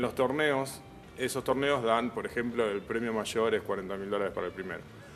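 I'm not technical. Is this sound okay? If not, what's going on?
Yes, this sound is okay, and there's nothing going on with it that needs fixing.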